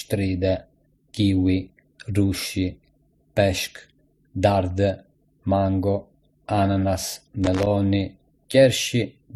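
Throughout the speech, smeared, warbly detail layered with a second set of artefacts points to transcoding between lossy codecs, likely a low-rate MP3 re-encoded as HE-AAC; the spectrogram shows patchy, blocky energy and nothing above 20.4 kHz. From 7.44 to 7.67 s, loose connector crackle: an unstable contact chops the signal, giving irregular scratchy bursts, seen as jagged spikes and dropouts in the waveform.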